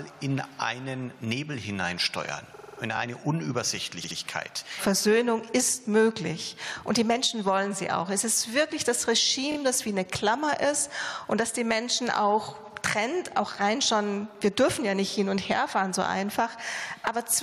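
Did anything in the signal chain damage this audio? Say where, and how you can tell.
Yes, two kinds of damage. The first is repeated frames, at the codec or storage stage. From 2.54 to 2.78 s a 46.4 ms chunk stutters, playing five extra times and adding about 232 ms. From 4.03 to 4.17 s a 69.7 ms chunk replays twice more, adding about 139 ms. Those chunk lengths fit whole compressed frames being written or sent again.

The second is a repeated buffer, at the driver or buffer stage during playback. From 2.97 to 3.00 s a 23.22 ms slice plays one extra time. From 9.52 to 9.57 s the same-length slice plays two extra times. Both come across as a quick stutter with hard joins, not a clean skip. That 23 ms size fits a 1024-sample buffer that the device replayed because fresh audio hadn't arrived in time.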